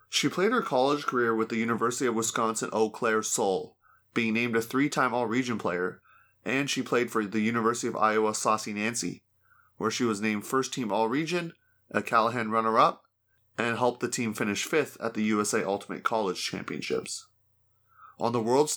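No technical faults can be heard anywhere in this speech recording; the signal stays steady and continuous throughout.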